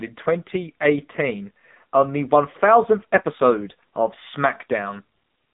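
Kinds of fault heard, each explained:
AMR narrowband mobile codec: Throughout, the speech passes through the AMR-NB mobile codec, so only about 150 Hz to 3.7 kHz survives. A spectrogram shows an empty band above a hard 3.7 kHz ceiling and thinned lows. The damage is heavy. Rebuilt from a vocal-tract model and a few pulses per 5 ms, the voice sounds buzzy and synthetic, which fits a low rate near 6.7 kbps.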